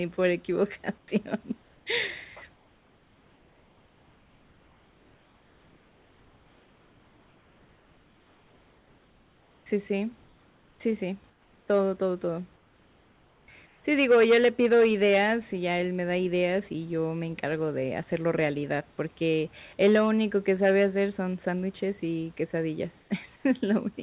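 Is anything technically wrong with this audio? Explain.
Yes. Comfort noise replaces the background in the speech pauses at 0.98, 2.56 to 9.66, 11.3, 12.56 to 13.48, 13.66, 23.0 and 23.36 s. The room's natural background drops out and a steady, featureless hiss takes its place, about 2 to 6 dB quieter. The likely cause is discontinuous transmission, with the receiver synthesising noise while the sender stays silent. Throughout, the narrowband call sound has nothing above 4 kHz.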